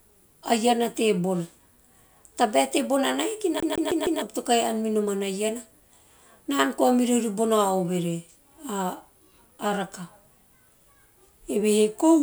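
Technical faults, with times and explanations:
3.60 to 4.22 s, CD stuck on one turn: the speech catches on a single fragment of about 0.15 s and plays it four times in a quick, evenly spaced stutter, each repeat cut by a brief mute, before playback moves on into "to kahi no". A scratch makes the laser jump back one track at the same point on each revolution, so the same tiny slice of audio returns again and again at a steady rate.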